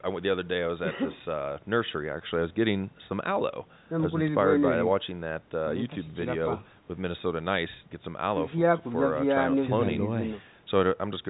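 No technical faults occur anywhere in the recording, so there is nothing to place in time order.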